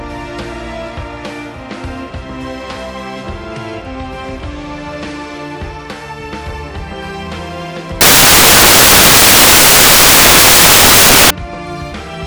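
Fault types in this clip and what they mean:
Samples built from the wrong bytes: The reader assembles each sample's bytes in the wrong order or offset. The rapidly changing low bits then dominate the values. From 8.01 to 11.30 s the sound becomes loud, harsh broadband noise.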